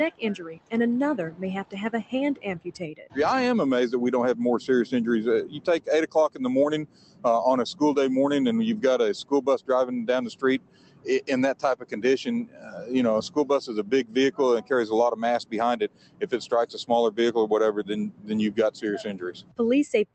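A noise suppressor built for speech was applied to music or sounds and runs across the whole clip. It treats held tones, ambience and decays as noise. So it keeps pulling them down, then letting them back up. The level swings by around 15 dB. Attacks mostly come through. What follows them sinks. The result pumps and thins out. It rides on an Opus call path with highs rolled off above 8 kHz.

Sound cut by the noise suppressor shows up at seven points: 0.11 to 0.73 s, 1.31 to 3.17 s, 5.46 to 7.25 s, 9.24 to 9.69 s, 10.34 to 14.71 s, 15.44 to 16.83 s, and 17.79 s to the end. In each stretch the suppressor mistakes sustained sound for noise. It drops it by up to about 17 dB. Tails are clipped short. Held sound fades and ducks.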